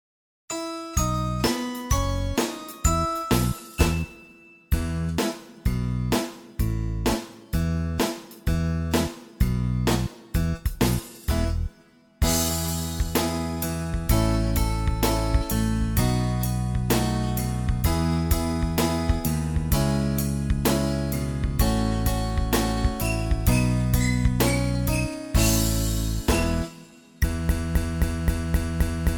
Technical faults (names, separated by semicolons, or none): broken-record loop